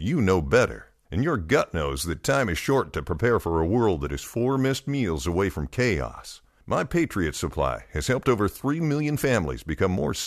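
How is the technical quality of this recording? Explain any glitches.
No glitches or technical faults can be heard anywhere in the recording, so there is nothing to explain.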